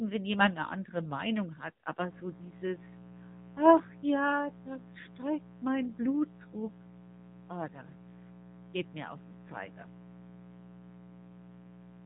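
Speech passes through the AMR narrowband mobile codec for the whole clip. Nothing above 3.8 kHz survives, and the synthetic, buzzy texture points to a low rate of about 7.4 kbps, not plain band-limiting. From 2.08 s to the end, a mains buzz sits roughly 20 dB below the speech. It is raspy and rich in harmonics of 60 Hz, unlike a smooth pure hum.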